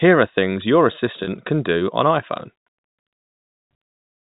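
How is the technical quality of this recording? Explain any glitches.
One glitch stands out: at 1.24 s the speech briefly catches on a slightly held, buzzy tone before carrying on at 1.27 s. The cause is packet loss with pitch repetition. About 30 ms of audio never arrived, which fits three 10 ms packets, and the receiver filled the hole by looping the last pitch cycle it had. The loop is too brief to fade out, so it sounds like a momentary frozen buzz rather than a dropout. The rest of the audio carries the narrow band and faint level-following hiss of G.711 telephone coding.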